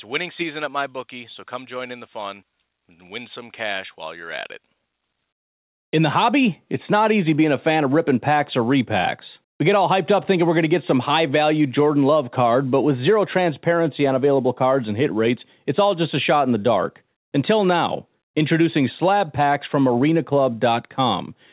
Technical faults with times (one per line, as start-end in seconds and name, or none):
none